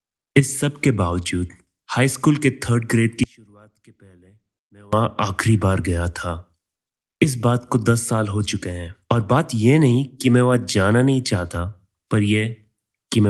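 Audio dropout to a faint residue, 3.24 to 4.93 s: the speech abruptly falls to a faint trace about 30 dB down, likely a break on a still-live path.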